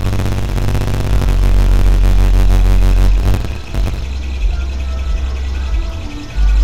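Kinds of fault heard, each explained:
Buffer tearing: A rough, robotic rattle at about 47 Hz runs from the start to 4.04 s. Writer and playback have slipped, so about half of each period replays audio some 40 ms old, with hard joins, which fits a 1024-sample buffer.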